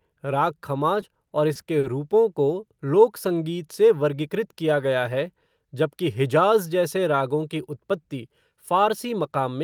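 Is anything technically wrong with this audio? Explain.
Yes: repeated stalls (stutter) from 1.01 to 1.85 s. Five late-packet gaps, the longest 40 ms, are bridged by stretching sound, so it drags rather than dropping out.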